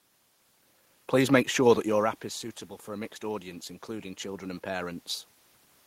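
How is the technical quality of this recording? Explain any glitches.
The recording has one technical fault, an automatic gain rise in the second half of the speech.

From 2.86 to 5.09 s, just after "your app is suitable", the automatic gain control ramps up. The input level dropped by about 13 dB, so the control read the signal as too quiet and raised its gain by about 4 dB over roughly two seconds. Voice and the room's background noise swell together, so the noise floor audibly lifts along with the speech. The level change near 1.5 s is the talker shifting position relative to the microphone, not a system fault.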